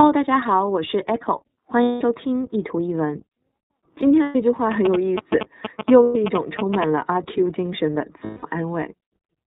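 Throughout, the iLBC codec cuts everything above 4 kHz and leaves speech rough and synthetic; the 30 ms framing fits its 13.33 kbps mode. Lost iLBC frames at 1.83 to 2.02 s (180 ms), 4.23 to 4.36 s (120 ms), 6.03 to 6.16 s (120 ms) and 8.24 to 8.44 s (180 ms) become held, buzzy vowels that recover instantly, unlike silent dropouts. From 4.72 to 6.84 s, GSM signalling bursts add galloping ticks and 217 Hz buzz at about speech level, pulsed rather than the steady buzz of mains hum.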